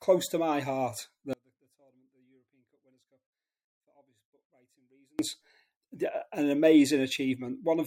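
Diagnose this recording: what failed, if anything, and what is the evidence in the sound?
Audio dropout to a faint residue from 1.33 to 5.19 s, nearly 3.9 s where the sound collapses to a faint leak some 35 dB down, then snaps back. The path stayed live through the gap, so the likely culprit is an intermittent analogue connection rather than a pause.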